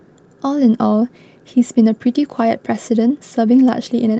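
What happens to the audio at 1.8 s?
Nothing goes wrong at 1.8 s: the speech there passes through the call path intact, with no dropout, glitch or distortion at that moment.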